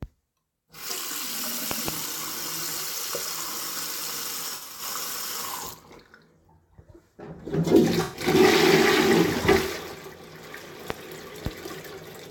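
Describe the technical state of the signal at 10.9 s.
A sudden voltage step or pulse, likely from a plug, switch, static discharge or driver glitch, enters the signal path between 10.90 and 10.92 s. The result is a single loud pop, peaking about 20 dB above the surrounding sound, which continues beneath it.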